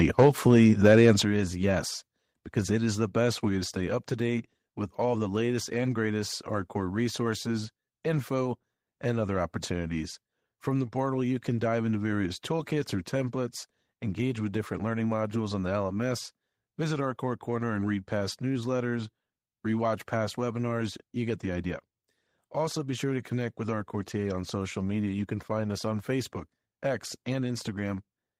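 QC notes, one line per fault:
0.18–1.11 s, microphone overload: The loudest syllables carry a harsh, crackly, buzzing edge, and the distortion stops just before "is yes because it". The peaks were likely driven about 4 dB past the converter's ceiling, so their tops were sliced flat. Roughly 3 percent of the samples in this stretch were clipped at the converter's limit. Those squared-off peaks add dense high harmonics, which sound like grit riding on the loud moments.
0.23 s and 1.23 s, microphone volume stepped down: The whole sound, background included, drops abruptly in level twice. The first drop is about 2 dB. The second is about 8 dB and lands right before "is yes because it". This is likely the call software reacting to the overloaded input and cutting the device gain in single jumps rather than a smooth fade, so each change comes as a sudden step.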